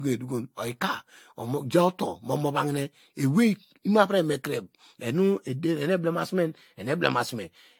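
From start to finish the speech carries a swirly, hollow smear, with consonant attacks blurred and nothing above 18.8 kHz. The likely cause is generation loss: repeated decoding and re-encoding, around five passes, consistent with an AAC-LC chain at about 96 kbit/s. Each pass quantises on a shifted frame grid, so the noise and spectral holes accumulate. A single encode at that rate would sound cleaner. Here the damage exceeds what the bitrate alone would explain.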